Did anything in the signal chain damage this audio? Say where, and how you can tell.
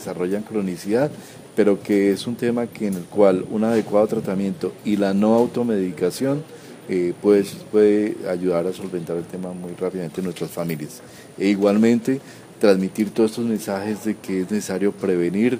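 No, there's no audible damage at any stage of the chain in this recording.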